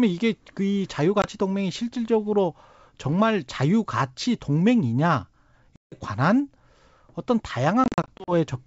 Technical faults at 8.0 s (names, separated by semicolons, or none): packet loss on an ADPCM call